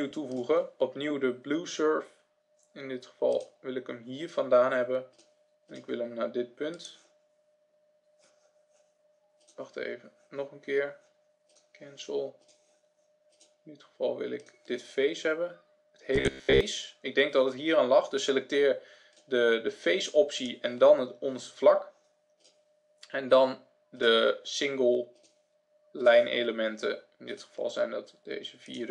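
At 16.16 s, lasting until 16.61 s, the sound turns into a rigid, metallic buzz: robotic sound from repeated short buffers. It is likely caused by audio arriving too slowly, so that the same fragment of roughly 15 ms is replayed in place of the missing material for most of that stretch. The repetition imposes a fixed 66.7 Hz buzz. On a spectrogram, evenly spaced horizontal harmonics appear; the waveform shows a short cycle roughly repeating.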